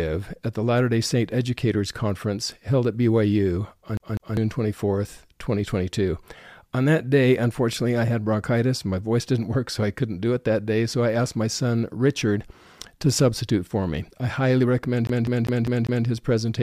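At 3.97 s the speech catches like a CD stuck on one turn. A scratch throws the laser back a track each rotation. A 0.2 s slice plays twice, with a short mute per jump. After "me I highly recommend", it loops five times, 15.07 to 16.07 s.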